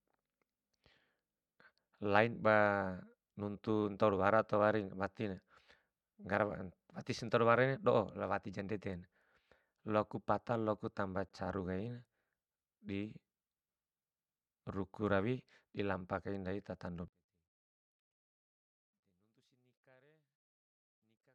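At 11.29 s the speech drops to silence for 17 ms, then resumes. This is a Bluetooth stall: likely interference delayed packets long enough for the receiver's buffer to empty, so playback paused briefly until retransmitted data arrived and output continued.

From 17.08 s, just after "dilampa kai ndai tatando", to the end of the clip, the mono level falls by about 39 dB and the speech nearly disappears. One channel is likely inverted in polarity, so the shared centre content cancels when the channels are summed, leaving only a faint residue.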